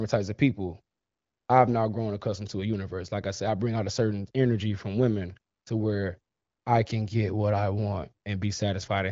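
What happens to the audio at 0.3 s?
Nothing goes wrong at 0.3 s: the audio is intact there, passing through a wideband HD Voice path whose band ends near 7.4 kHz.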